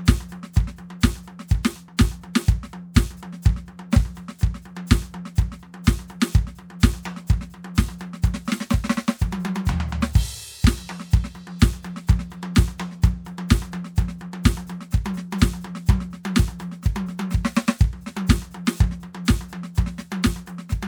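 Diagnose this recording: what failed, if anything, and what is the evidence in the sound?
Nothing in the signal chain failed: the music plays through with no dropouts, discontinuities or added noise at any point.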